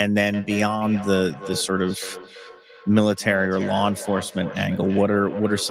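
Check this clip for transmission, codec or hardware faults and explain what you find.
There's one clear problem: feedback echo between two devices. From 0.33 s to the end, the speech comes back roughly every third of a second, at most about 14 dB below the voice. Two devices on the call in one room are probably feeding each other, and each echo canceller only removes its own playback.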